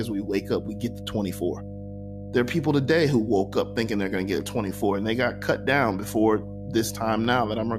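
Mains hum runs under the speech from start to finish: a steady 50 Hz tone, roughly 10 dB below the speech, leaking in from the power line through a ground loop or nearby transformer. A spectrogram shows an unbroken horizontal line at 50 Hz with fainter harmonic lines above it.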